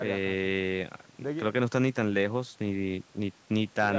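Nothing goes wrong anywhere in this speech; it's simply been through a call's microphone processing, which trims the deepest bass and leaves nothing above 8 kHz, and that's just how such a path sounds.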